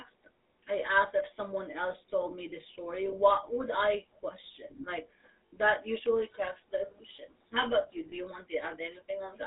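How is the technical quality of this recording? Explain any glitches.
The recording has been through a plainly degraded phone channel, with two brief dropouts.

Throughout, the speech has passed through the GSM full-rate codec, which fits GSM's 13 kbps coding. That codec rebuilds the voice from a vocal-tract model driven by coarse, regularly spaced pulses, and the line keeps only about 300 Hz to 3.7 kHz. The result is plainly audible buzzy, gravelly roughness and muffled, band-limited speech.

At 5.47 to 5.55 s, just before "usually cracks the illusions", and at 8.10 to 8.18 s, just after "about you", there are lost GSM frames. The decoder filled each gap by repeating the last good frame. The first gap lasts about 60 ms, which fits three lost 20 ms frames. The second fits a single lost frame. Each gap sounds like a short, rough metallic ring where the sound is held.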